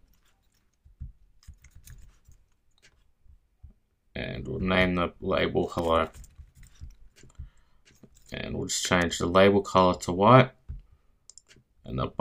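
Sharp snaps at 5.78 s and 9.02 s, peaking at about -25 and -20 dBFS, are electrical switching spikes, likely arcs from nearby switching coupling into the audio line.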